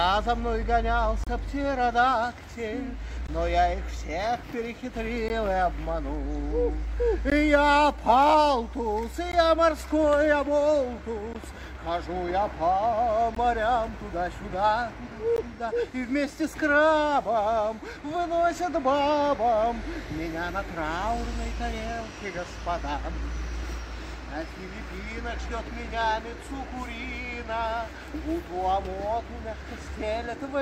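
At 1.24 to 1.27 s there's a 31 ms gap at a join of encoded pieces, then 16 ms ones every 2 s at 3.27, 5.28, 7.30, 9.32, 11.33, 13.35 and 15.36 s. The chunks were joined with their encoder start delay and end padding left in, so the sound blinks out with smeared edges and picks up where it stopped.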